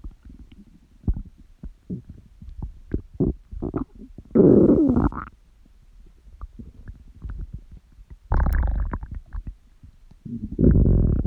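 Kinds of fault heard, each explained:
Electrical switching spike: a single sharp snap at 8.53 s, over in an instant and peaking at around -20 dBFS, sitting on top of the sound rather than belonging to it. The likely cause is a nearby switch, motor or static discharge arcing briefly and coupling into the audio line.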